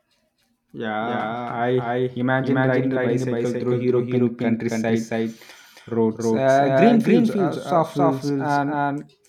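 Throughout, the speech has a doubled audio track. An equally loud, dry copy trails about a third of a second behind, likely captured twice.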